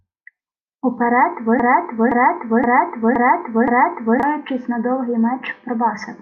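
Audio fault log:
1.60–4.23 s, broken-record loop: a 0.52 s fragment of the speech repeats back to back five times, so the same syllables come round again with identical timing and pitch, and the sound that belonged in that span never plays. On a waveform the envelope forms five matching blocks; a spectrogram shows the same harmonic pattern copied side by side. The likely cause is a stalled player or stream replaying its last buffer.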